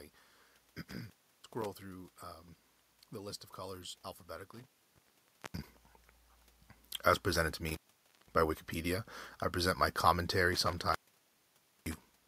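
Intermittent contact strikes four times: 0.88 to 1.66 s, 4.52 to 5.69 s, 7.69 to 8.34 s, and 10.53 s to the end at 12.27 s. Each time a loose connection briefly opens, so the speech drops out for 0.34, 0.88, 0.52 and 0.92 s respectively, with crackle at the break and remake and faint hiss while the line is open. The level change near 4.5 s comes from the talker moving, not the connection.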